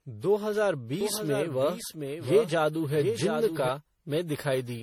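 Throughout, generation loss leaves the speech swirly, hollow and smeared, with blurred attacks and nothing above 19.7 kHz. The cause is likely around ten passes of MP3 coding at about 64 kbit/s, which degrades it far more than a single encode would. From 1.01 s to 3.69 s a doubled audio track runs a second full-band copy about 0.7 s behind and about 5 dB quieter. It likely comes from an edit or a slower capture path, and unlike an echo it has no decay or room colour and starts and stops abruptly.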